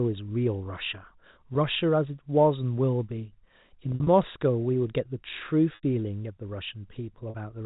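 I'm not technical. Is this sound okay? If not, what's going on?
No. Bits of the sound go missing in transit, a fault called packet loss with pitch repetition. To cover each gap, the receiving end repeats the last small cycle of the voice. At 1.54 s that's a 10 ms blip. At 7.30 to 7.34 s the gap is longer, so the sound briefly holds a buzzy, stuck tone. At 5.75 to 5.83 s the gap is long enough that the held sound fades into silence before the voice returns. From 3.89 to 4.07 s several dropouts cluster together.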